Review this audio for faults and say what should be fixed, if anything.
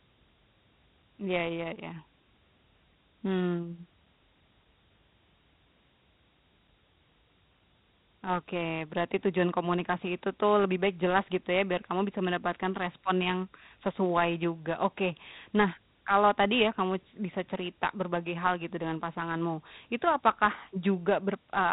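Dialogic VOX ADPCM is audible throughout: nothing sounds above 3.9 kHz, and a gritty hiss rides on the speech, swelling and fading with it. That fits 4-bit steps at 8,000 samples a second (32 kbps). A plain telephone band-limit would cut the top without that level-following grit. Keep a linear PCM master and encode to VOX only for playback.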